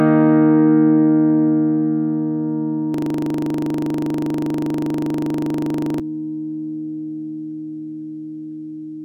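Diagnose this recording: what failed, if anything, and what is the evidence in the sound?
The failure is at the driver or buffer stage: a system hang loop. From 2.94 to 6.00 s the audio freezes into a 40 ms slice repeating about 76 times, a rough 25 Hz buzz. The host stalled while the hardware kept replaying the same ring buffer.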